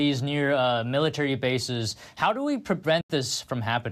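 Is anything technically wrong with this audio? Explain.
Yes. From 3.01 to 3.10 s, just after "bases how do we", there is AAC frame loss with muting. About 90 ms of audio, roughly nine short frames, was lost, and the decoder replaced that spectrum with zeros. Overlapping windows fade the sound out and back in, leaving a soft-edged gap. The clip likely passed through low-delay AAC compression, which adds only slight coloration.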